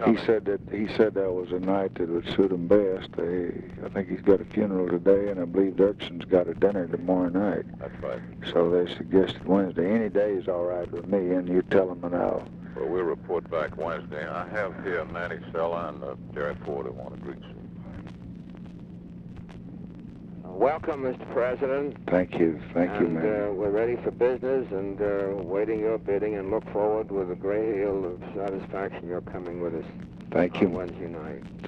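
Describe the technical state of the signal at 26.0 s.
Nothing goes wrong with the signal at 26.0 s; the audio is intact at that point.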